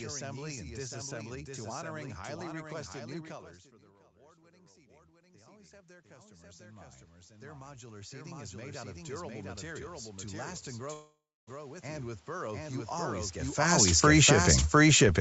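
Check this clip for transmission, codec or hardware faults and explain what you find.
Yes, there are faults: a doubled track runs throughout, automatic gain rises three times and falls once, and a long network dropout breaks the sound near 11 s.

Doubled audio track: A second full-band copy trails the original by about 0.7 s, about 5 dB quieter, for the whole clip. It is likely an extra capture through a slower path. Unlike echo or reverb, the copy has no decay and no room colour.

Automatic gain rising: After "highly requested new colors", from 3.71 to 9.9 s, the gain control lifts the level by about 22 dB because the input had dropped. Smaller rises of about 5 dB follow at 11.80–13.19 s and 14.25–14.80 s. Voice and background swell together, which separates this from a talker moving closer.

Long network dropout: Just after "to last and", from 10.93 to 11.50 s, about 0.54 s of audio never arrives. 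This is likely packet loss. The receiver stretches the last sound into a fading buzz or hiss, leaving about 0.28 s of near silence, and the sound resumes with that part missing. Unlike a natural pause, the fill has that synthetic buzz or hiss and the lost material never returns.

Automatic gain falling: From 13.58 s to the end, the control lowers its gain, so the sound sinks along with its background. A talker shift around 13.5 s changes only the voice level. Here the room noise drops too.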